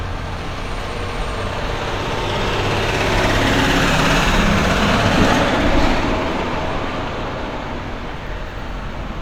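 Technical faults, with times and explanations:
1.69–1.71 s, overlap between stream segments: two segments' timestamps overlap, the player discards 28 ms of real sound, and the waveform jumps, causing a brief skip.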